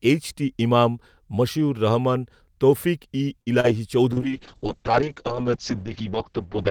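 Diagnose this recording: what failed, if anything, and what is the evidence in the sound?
Short stall from a late packet at 3.41–3.48 s: the network delivered a packet late, the jitter buffer ran dry, and about 49 ms of held speech bridged the gap.

Short concealed packet loss at 3.60–3.66 s: a packet never arrived, so about 40 ms of speech is missing, covered by a brief decoder-extrapolated smear.

Call bitrate drop from 4.12 s onward: the encoder fell from 48 to 7 kbps and audio bandwidth narrowed from 20 kHz to 8 kHz, leaving speech muffled and rough.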